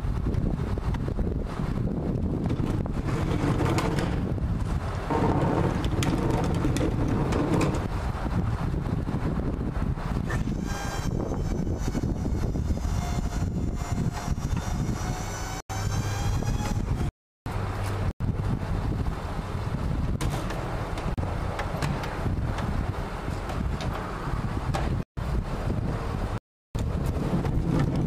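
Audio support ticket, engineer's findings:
Processor overload crackle, 6.15–6.32 s. Short gritty burst of crackle riding on the sound, then clean again. Probable component: audio callback/DSP thread. Around five consecutive missed deadlines on very short buffers, roughly 1.5 ms each. Each miss drops a sliver of silence with hard edges, and those edges clustered together read as tearing. Clears once the CPU load passes.

Block of digital silence, six occurrences. Abrupt dropouts to silence, no fade:
15.60–15.70 s (93 ms), 17.09–17.46 s (372 ms), 18.11–18.20 s (93 ms), 21.14–21.18 s (36 ms), 25.03–25.17 s (141 ms), 26.38–26.75 s (372 ms).
Probable component: output buffer fill. Blocks zeroed when not filled in time. The 93 ms gaps fit a 4096-sample block and the 372 ms gaps fit 16384 samples at 44.1 kHz.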